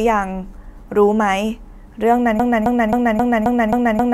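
From 2.40 s to the end, a broken-record loop repeats one 0.27 s fragment seven times back to back, likely a stalled player resending its last buffer; the following speech is lost.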